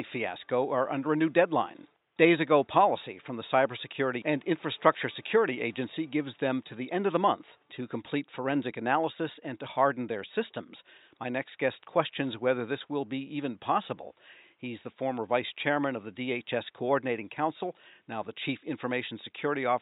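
Nothing goes wrong in this speech recording at any point, and the only thing in the background is some faint room noise sitting about 50 dB below the talking.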